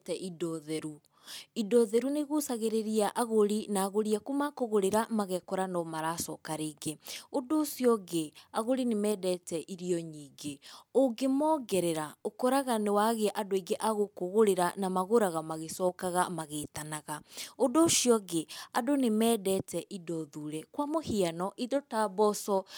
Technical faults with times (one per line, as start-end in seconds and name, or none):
none